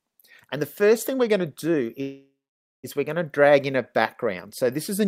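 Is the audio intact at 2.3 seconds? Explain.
No. At 2.3 seconds the audio is inside a call audio freeze running from 2.01 to 2.86 s. The sound just before the stall is drawn out into a fading buzz that decays into silence, about 520 ms of it, before the audio resumes where it stopped. The likely cause is packets held up in transit, leaving the jitter buffer empty. The receiver filled about 820 ms, so nothing is lost, but everything afterward arrives that much later.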